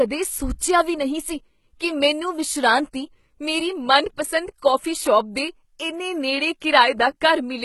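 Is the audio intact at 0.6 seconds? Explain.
No. At 0.6 s, as throughout the speech, the signal has likely passed through HE-AAC compression at a very low rate, one that fits roughly 16 kbps. Only the lower spectrum is coded. The treble is synthesised by copying lower bands upward under a coarse envelope, and it stops at 11.8 kHz. Because those copied harmonics don't line up with the real ones, the heavy damage makes s sounds gritty, metallic and lispy.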